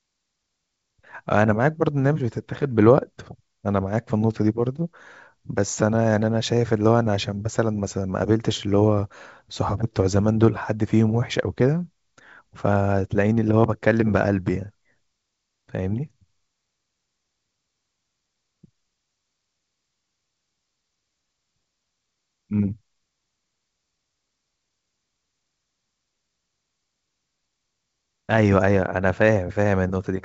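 No faults can be heard anywhere in this speech.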